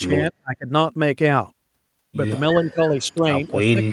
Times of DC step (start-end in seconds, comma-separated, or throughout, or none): none